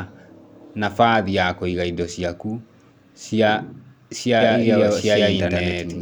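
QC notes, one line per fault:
4.41–6.02 s, doubled audio track: from 4.41 s to the end, a second copy of the speech about as loud as the first trails it by roughly a tenth of a second, likely from a second capture path or misaligned edit. The waveform shows its abrupt onset, and the spectrogram shows full-band shifted repeats with no decay.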